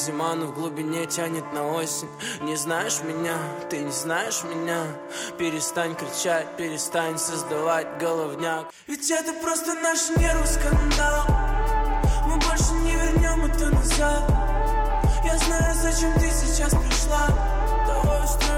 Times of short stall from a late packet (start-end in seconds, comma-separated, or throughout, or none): none